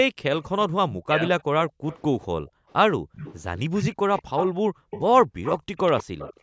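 From 0.11 to 0.22 s, the echo canceller clamps the microphone while the far end plays, so the room background drops by about 40 dB. This background gating by the echo canceller recurs at 1.73 to 1.86 s, 2.41 to 3.13 s and 3.98 to 6.42 s.

From 0.43 to 2.26 s there is a delayed copy of the speech 198 ms behind, about 20 dB down, likely an echo leak where the canceller failed to remove loudspeaker pickup. It returns louder, about 10 dB down, from 3.13 to 6.4 s.

At 1.05 to 1.45 s, with both sides talking, the canceller likely cannot separate the near talker from the echo and pulls the speech down by about 40 dB. This is speech suppressed in double talk. The band ends at 8 kHz, as the call processing shapes it.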